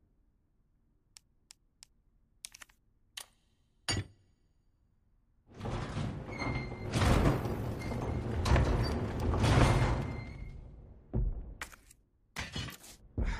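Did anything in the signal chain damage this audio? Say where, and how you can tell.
Yes. From 6.66 to 8.66 s there is a time-stretched section. The pace jumps to about 1.94 times normal while pitch holds steady, and the sound turns rushed. The likely cause is software fitting the audio to a length by dropping short segments.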